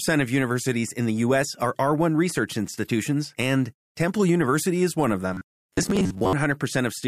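Speech clip with robotic sound from repeated short buffers from 5.34 to 6.33 s, right after "is one of": a rigid metallic buzz at 93.8 Hz, fitting a repeated chunk of about 10.7 ms, with roughly half the audio dropped, likely from late-arriving buffers. Unlike codec warble, the pitch stays fixed rather than swirling.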